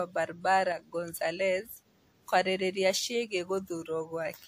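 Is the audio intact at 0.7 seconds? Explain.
No. From 0.72 to 0.79 s there is a one channel drops out fault. For about 70 ms the level falls abruptly by about 6 dB and then recovers. The likely cause is one stereo channel briefly going silent, which halves the shared content in the mono sum.

The moment also carries transcoding between lossy codecs, present across the whole clip. Nothing is heard above 15.5 kHz, and two layers of coding smear blend together. This likely comes from successive lossy encodes, with the sound pointing to a WMA stage followed by AAC-LC.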